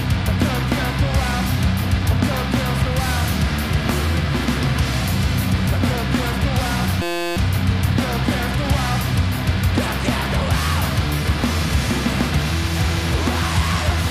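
At 7.02 s the audio locks into a system hang loop until 7.37 s: the driver stalled while the hardware kept replaying one tiny slice of its ring buffer, about sixty times over. Each slice lasts 5.8 ms, which fits a 256-sample buffer, so the repetition fuses into a steady buzz at 172 Hz. A waveform shows an identical short cycle tiled across the gap; a spectrogram shows evenly spaced horizontal harmonic lines of 172 Hz. Essentially no audio goes missing.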